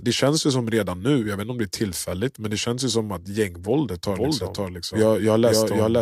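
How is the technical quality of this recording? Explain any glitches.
One glitch stands out. From 4.09 s, after "ju som att gängvåldet", to the end, a doubled audio track appears. An equally loud copy trails by about half a second. It likely comes from a second, slower capture path.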